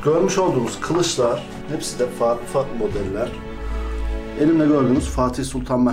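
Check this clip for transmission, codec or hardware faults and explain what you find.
Nothing stood out on listening that would point to a transmission, codec or hardware problem.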